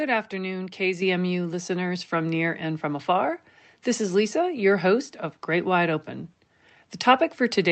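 Microphone volume stepped up at about 1.02 s in this speech clip: the call software raised the input gain in one step, so voice and background jump together by about 6 dB. The call path's coding caps the audio around 8 kHz, consistent with Opus at a modest bitrate.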